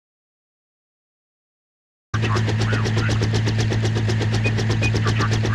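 From the start until 2.14 s the audio input was likely lost, through a disconnected device, failed link or stray mute, while recording carried on writing silence. This audio dropout to silence is dead, with no room tone, before the sound abruptly comes in mid-flow.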